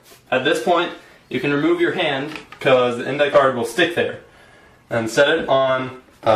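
From 0.79 to 2.45 s, a clock-matching stage likely took a single corrective step on playback rate to rebalance its buffer: the sound runs about 6% fast and rises roughly a semitone (about 101 cents), then returns to normal speed and pitch.

At 3.29 to 3.35 s, compressed frames are skipped: a few frames of 46.4 ms each, around 150 ms of audio in all, never reach the output, so the sound jumps forward.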